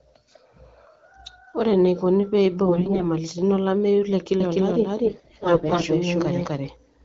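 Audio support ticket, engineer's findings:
AMR bit errors, 2.66–3.10 s and 5.04–5.87 s: hoarse, scratchy, gargly speech at steady pitch and level. Flipped low-protection bits in AMR-WB frames misplace excitation pulses and corrupt fine gain and spectral values.

Doubled audio track, 4.40 s to end: a full-band duplicate trails around 300 ms behind at roughly equal level, with no decay or room colour and an abrupt onset. Likely a second capture path or a misaligned edit.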